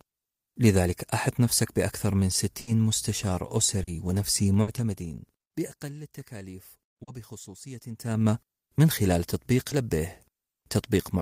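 At 2.61 to 2.69 s, and again at 4.61 to 4.69 s, there is a burst of packet loss in this speech. Several consecutive packets failed to arrive in time, so the receiver stretched the last sound for about 60 ms, letting it fade into a held buzz or hiss, then jumped ahead with roughly 60 ms of audio gone. The audible skip in the flow, not just a blur, sets these apart from the shorter dropouts.

Between them, at 3.83 to 3.89 s, comes the first short concealed packet loss. A few hundredths of a second never reached the decoder, and about 40 ms was patched by extrapolating the preceding pitch or noise before blending back into real audio. The result is a brief smear or wobble rather than a fading hold.

The same short concealed packet loss recurs at 7.03 to 7.09 s, again with about 40 ms concealed. At 9.69 to 9.73 s, only about 20 ms is patched, leaving a brief smear.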